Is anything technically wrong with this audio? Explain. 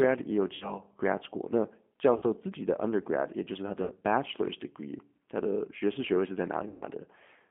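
Yes. Two faults are audible.

Throughout, the speech is carried by the G.729 codec at 8 kbit/s. This codec does not send the waveform. It sends a vocal tract filter, a pitch predictor and a few pulses per frame, and the decoder rebuilds the speech from these. The line band runs from 200 Hz to 3.4 kHz, so the speech sounds thin and muffled. The codec damage is plainly audible as a rough, slightly synthetic texture.

There are also four dropouts from VoIP packet loss concealed by the speech codec. They come at 0.55 to 0.80 s, after "也有"; at 2.16 to 2.24 s, after "gradschool那教"; at 3.84 to 3.94 s, after "就是他的"; and at 6.68 to 6.85 s. The first three each lose about 60 ms of audio, and the last loses about 140 ms. In each gap, the decoder repeats its last pitch and filter at a falling level. This produces a brief buzzy tone or coloured noise that fades, and the speech stays weak for a moment afterwards.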